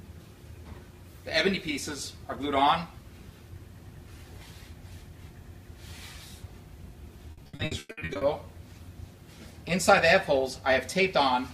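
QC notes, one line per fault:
7.31–8.23 s, repeated packet loss (robotic sound): The audio turns choppy for just under a second. Eleven short holes land in quick succession, the longest about 100 ms. Each hole is bridged by stretching the last bit of sound, so roughly 0.52 s of the stretch is filler, over half of it. The same fragment is repeated to fill each gap, and the real audio in the gaps is gone.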